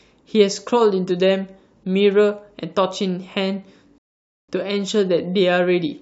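At 3.98 s the speech drops abruptly into silence and stays silent until 4.49 s, a rebuffering stall. The player exhausted its downloaded audio and had to halt playback while more data arrived. When it restarts, the speech picks up at exactly the point where it broke off, so nothing is missing. The only damage is the inserted gap of 0.50 s, which makes the delivery stutter and stretches the timeline.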